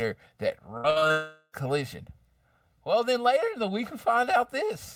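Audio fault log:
throughout: channel delay (comb filtering). One channel lags the other by around 1.5 ms, and summing cancels evenly spaced frequencies from near 300 Hz up. The sound is hollow and phasey.
0.77–1.12 s: repeated packet loss (robotic sound). Several short gaps, the longest 65 ms, are patched by repeating the last sound. Nearly half this stretch is filler, so it turns choppy.
1.12–1.55 s: long network dropout. The last sound stretches into a fading buzz for about 0.42 s, with a brief silence. The likely cause is audio that never arrived, so that part is lost when sound resumes.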